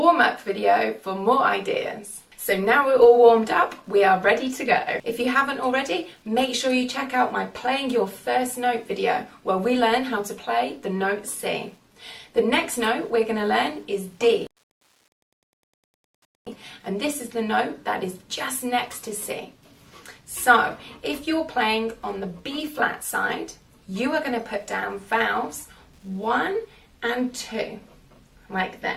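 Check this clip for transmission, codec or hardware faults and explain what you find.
One hardware fault runs through the whole clip: Wi-Fi interference. A nearby Wi-Fi radio's beacon, repeating every 102.4 ms, is rectified by the audio circuit, giving a steady ticking just under ten times a second, faint at about 45 dB below the sound. Unlike mobile-phone buzz, which repeats about 217 times a second and merges into a tone, these are separate, countable ticks.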